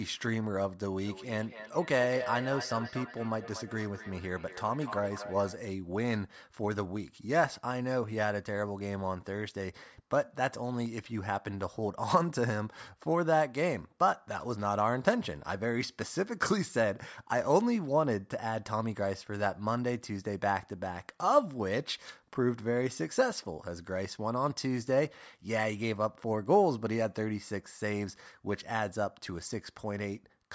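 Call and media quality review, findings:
Feedback echo between two devices, 0.98–5.6 s. Speech recurs at a fixed spacing of about 0.2 s, loudest about 11 dB under speech. Two co-located endpoints; each canceller removes only its own playback. Discrete ringing repeats, not reverb's smooth tail.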